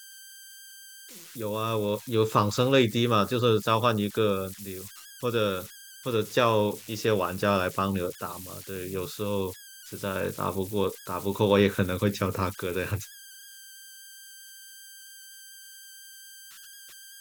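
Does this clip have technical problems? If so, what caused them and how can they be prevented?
Yes. Throughout the speech there are converter idle tones: a whistle, roughly 1.5 kHz, sits in the pauses and turns into a grainy, hissy texture under the voice, at about 20 dB below the speech. An undithered delta-sigma converter fed a very small input settles into repeating bit patterns, and those patterns produce tones whose pitch follows the input's DC offset. Prevention: use a converter with proper dither and keep low-level input offset under control.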